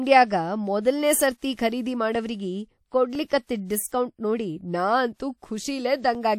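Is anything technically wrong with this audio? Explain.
Yes, there are periodic USB or driver dropouts. From 2.15 to 6.15 s there's a tick about once a second, roughly five in all. Something is stalling the USB bus or audio driver on a fixed one-second cycle, and each stall drops around a millisecond of speech and leaves silence in its place.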